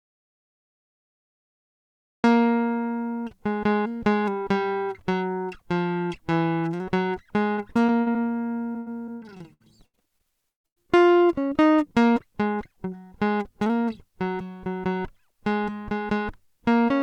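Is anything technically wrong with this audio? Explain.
Yes. There are two kinds of fault.

From the very start to 2.24 s there is an audio dropout to silence. The music is replaced by silence, with no room tone at all. The likely cause is a lost input while the recorder kept writing.

Repeated packet loss (robotic sound) affects 7.55 to 8.16 s and again 8.72 to 10.78 s. Short holes keep appearing, up to 60 ms and then 140 ms long. Each is patched by stretching the last sound, so the music turns choppy, with pieces missing.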